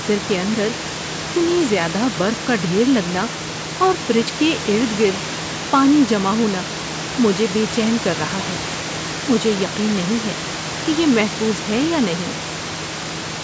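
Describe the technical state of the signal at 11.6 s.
At 11.6 s the signal is intact, with the speech carried cleanly through the call's normal microphone processing and only the quiet room background beneath it.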